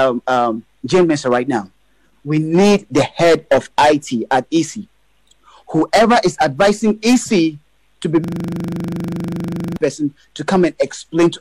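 From 8.24 s to 9.77 s there is a system hang loop. The system froze while the sound hardware kept replaying its buffer. A 40 ms slice repeats about 38 times. At 25 repeats per second, it becomes a rattling buzz.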